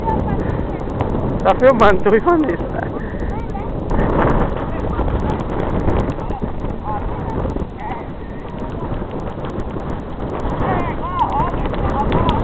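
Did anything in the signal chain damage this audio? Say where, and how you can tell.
Yes. The resampler restarted on every block throughout the clip, at the sample-rate conversion stage. Faint ticks recur at a steady 10 Hz, heard only while sound is present, which fits 100 ms blocks each converted separately (likely 44.1 kHz down to 16 kHz), leaving a small error at every block edge.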